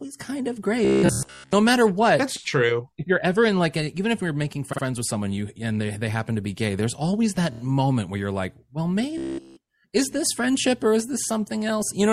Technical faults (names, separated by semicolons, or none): MP3 compression; robotic sound from repeated short buffers; repeated frames